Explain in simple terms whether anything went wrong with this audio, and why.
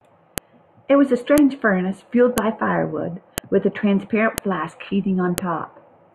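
A sharp click lands at 0.38, 1.38, 2.38, 3.38, 4.38 and 5.38 seconds, once every second. This is a file header played as audio. The speech was joined from one-second pieces, and each piece's header data played as sound.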